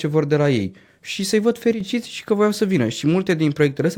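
From 1.73 to 1.80 s, just before "și că voiau să", the speech drops by about 6 dB for a moment, likely one channel drops out briefly before the mono sum.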